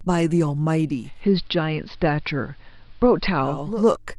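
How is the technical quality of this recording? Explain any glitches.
The speech sounds noticeably duller and faintly hissy for most of the middle of the recording. From 0.85 s to 3.87 s the sound loses its treble, takes on a low hiss some 40 dB below the speech, and shifts in level by about 1 dB. That is digital radio blending to analogue: the receiver lost its digital stream and cross-faded over about 0.48 s to the station's AM broadcast, with its narrower bandwidth and noise floor, before returning.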